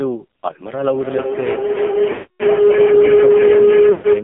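A short speech recording, heard through an AMR narrowband mobile codec for its whole length. The sound sits in a narrow telephone band, roughly 200 Hz to 3.5 kHz, with nothing above. The codec damage is heavy. The voice is buzzy and synthetic, as if rebuilt from a crude vocal tract model. That coarseness points to one of the lowest AMR-NB modes, around 6 kbps. There are also two bursts of lost AMR speech frames. The first runs from 2.12 to 2.43 s. There the decoder holds the last good settings, so the sound smears and fades before returning rough. The second, from 3.92 to 4.07 s, is shorter. It also stretches briefly and dips away.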